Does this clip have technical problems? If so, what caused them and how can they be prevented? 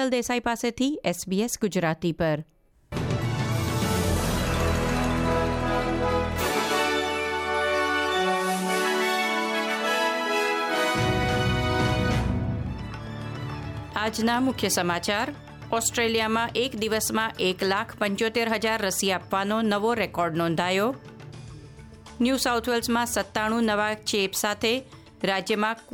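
No, nothing stood out as a technical problem on listening to this clip.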